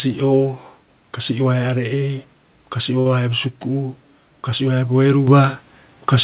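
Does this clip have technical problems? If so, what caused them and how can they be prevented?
Yes. From 3.0 to 3.06 s there is a short stall from a late packet: the jitter buffer ran empty, so the receiver stretched the last sound by 54 ms and then resumed with nothing lost. More jitter-buffer headroom or a steadier network connection prevents it.

At 5.28 s, right after "haia bo", the microphone volume stepped up: the call software raised the device's input level by about 7 dB in a single jump, lifting voice and background together. Turning off automatic input-level adjustment, or setting the level correctly beforehand, prevents it.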